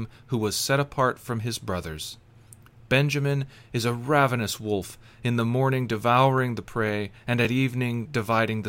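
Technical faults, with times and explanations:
6.38 s, block of digital silence: between "wolf in the morning" and "the prey and", the output briefly dropped a handful of samples to zero, likely because the buffer wasn't filled in time. The gap lasts only 0.18 ms, which fits a run of about eight samples. That is too short to be heard as a hole, so the abrupt drop to zero and back is heard as a single tick.
7.45 s, block of digital silence: just after "the prey and", a longer run of zeros, 2.61 ms, replaced the signal with no fade on either side. The gap is still too short to be heard as a hole, so the hard edges at entry and exit come across as a tick or dip.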